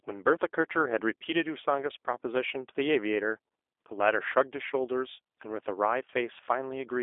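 From start to finish the speech carries G.729 codec damage, the rough, slightly synthetic texture of an 8 kbit/s VoIP path that rebuilds each 10 ms frame from a vocal tract model and a few pulses. Everything sits in roughly a 300 Hz to 3.6 kHz telephone band, so it sounds thin.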